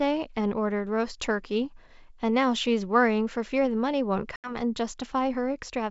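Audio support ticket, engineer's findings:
Hard-edged 80 ms dropout around 4.36–4.56 s, with rough re-entry. Packet loss on the ADPCM call: a few packets were lost, and the decoder's predictor and step size drift until they resync with the G.722 sender.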